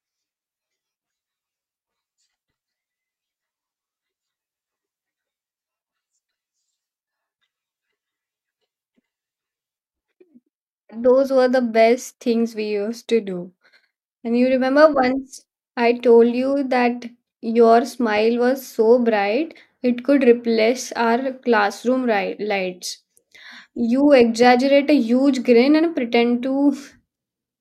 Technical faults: none

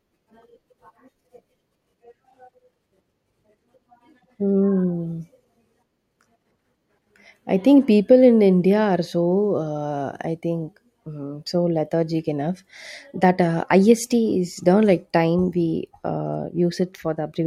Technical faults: none

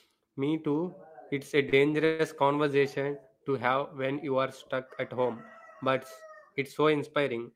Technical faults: short stall from a late packet; call audio freeze

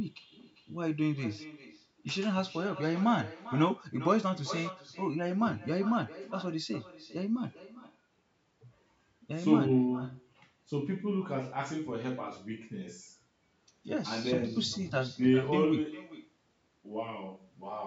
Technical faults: echo with no canceller

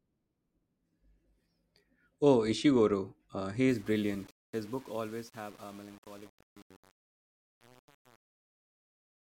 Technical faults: truncation distortion on a fade

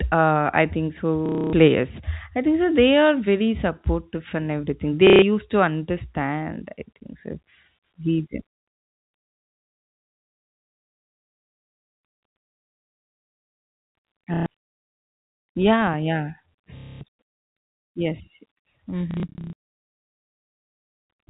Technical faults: packet loss with last packet repeated

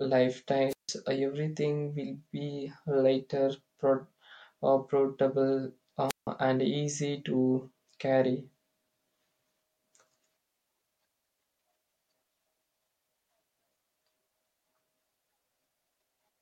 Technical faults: wireless microphone squelch dropout

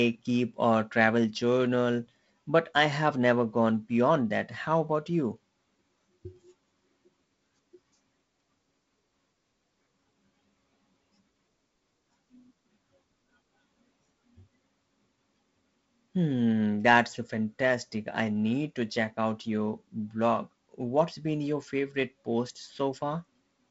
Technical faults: none

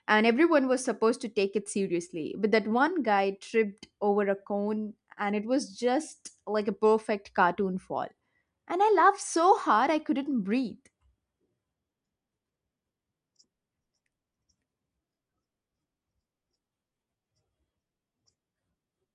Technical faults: none

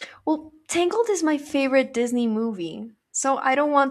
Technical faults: none

